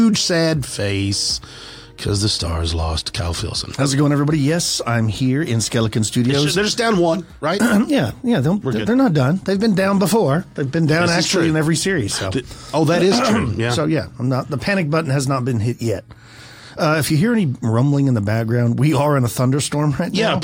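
Two devices were likely running on separate, unsynchronised clocks, disagreeing by a few hundred parts per million, so a single sample is dropped or repeated each time the drift adds up to one sample. From 0.12 s to 20.43 s this produces clock slip clicks roughly every 70 ms, around three hundred in all, blending into a faint, steady rattle that rides on louder sustained sound and disappears in silence.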